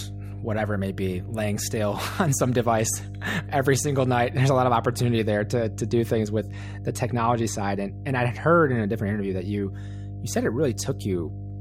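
There's mains hum the whole way through, a steady 50 Hz drone from power leaking in, sitting fairly loud, not far beneath the speech.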